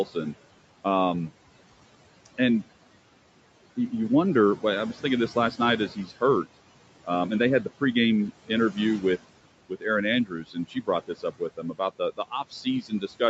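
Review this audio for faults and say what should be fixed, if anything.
Noise suppressor artifacts run through the whole clip. The suppressor treats the steady room noise as something to remove and pulls it down by about 18 dB, frame by frame. So the background sinks in the gaps and creeps back up under the speech. The room noise itself sits about 17 dB below the speech. To prevent this, use gentler suppression or a better noise estimate.

Speech cut by the noise suppressor happens three times. The first is between 5.35 and 6.11 s, just after "I was thinking this". There, about a tenth of a second of quiet speech drops by up to about 11 dB. The second is between 9.69 and 9.86 s. A similar short stretch falls by up to about 16 dB. The third runs from 10.25 s to the end. Soft sounds keep dipping by up to about 16 dB. The suppressor is mistaking low-level speech for noise. Word edges sound swallowed as a result. 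To prevent this, raise the speech-protection threshold so quiet speech is never classed as noise.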